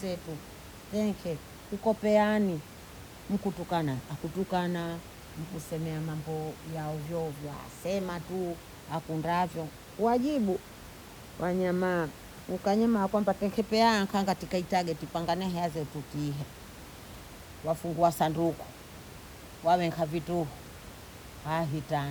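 There are no technical faults to describe at any point in the speech, and the quiet room noise beneath it, about 18 dB below the voice, belongs to the recording itself.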